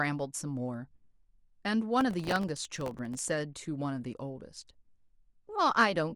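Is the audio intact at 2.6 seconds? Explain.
No, 2.6 s falls inside a burst of processor overload crackle running from 2.01 to 3.19 s in this speech. The processor keeps missing the deadlines of very short buffers, on the order of a millisecond or two each, and dozens of them go unfinished over that stretch. Each miss repeats a scrap of old audio with hard edges, so a gritty tearing rides on the speech. On a waveform this shows as many small steps and discontinuities, and on a spectrogram as dense vertical broadband streaks across that span.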